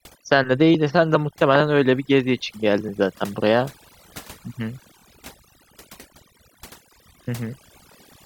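From start to finish the background sits in an unnatural near-silence flecked with twinkling specks. This is overdone noise removal. The noise reduction was set too aggressively, so every frequency band that came close to its noise estimate was pulled far down or cut entirely. The quieter components of the speech fell below that threshold and were removed along with the noise.

From 4.99 to 5.03 s, and again from 7.25 to 7.28 s, a short slice of audio plays twice in a brief stuttering catch before the speech continues slightly further along. This is Bluetooth stutter. Data arrived late or not at all, so the receiver replayed its last buffer to fill the gap. The repeated slice lasts about 23 ms, which fits a single lost packet. Playback then resumed from where the stream had moved on to.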